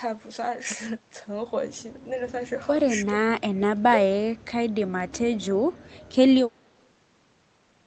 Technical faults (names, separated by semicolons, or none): speech suppressed in double talk